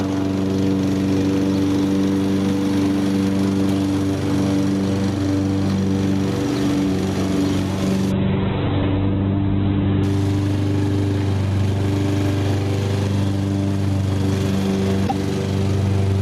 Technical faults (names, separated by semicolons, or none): gain pumping; call bitrate drop